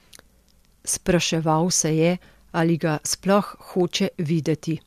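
No technical faults can be heard anywhere in the speech recording.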